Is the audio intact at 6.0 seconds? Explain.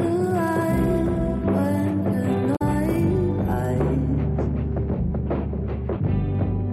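Yes, the audio is intact at 6.0 seconds, with no dropout, click, distortion or other fault at that point.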